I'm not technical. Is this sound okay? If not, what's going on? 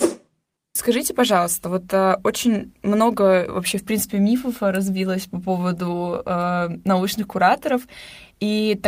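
Yes, no faults here.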